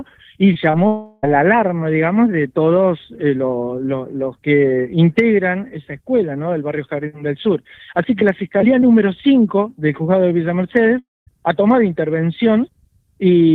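Right at the start there's short concealed packet loss, at 0.53 to 0.57 s and again at 0.71 to 0.75 s. About 20 ms went missing each time, and the receiver patched the gap by extending the preceding sound, so you hear a quick smear or wobble rather than a clean cut.

Just after, from 0.87 to 1.25 s, the audio turns into a fading synthetic continuation for roughly 360 ms before the real signal returns. The same thing happens at 10.99 to 11.29 s, where a brief buzz or hiss decays into about 210 ms of silence. Both are likely long network dropouts, with the lost stretch never played back.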